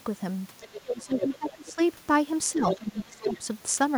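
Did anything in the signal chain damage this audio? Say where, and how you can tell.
Yes. The damage sits in call processing, where the echo canceller likely failed to remove the loudspeaker signal from the microphone path. The result is the other side's voice leaking through as a second, fainter talker underneath the main speech, at 0.61 to 1.03 s, 1.19 to 1.35 s, 1.51 to 1.83 s, 2.69 to 2.78 s and 3.2 to 3.38 s. The leaks range from only slightly quieter than the talker to much fainter, which points to leftover echo rather than a second person in the room.

The same stage shows speech suppressed in double talk, from 0.9 to 1.79 s and again from 2.52 to 3.45 s. With both sides talking at once, the canceller likely could not separate its own talker from the echo, so it clamped the whole signal. The talker's level falls by as much as about 20 dB, dipping and breaking up for well over half a second in each stretch, and these stretches overlap with the leaking voice.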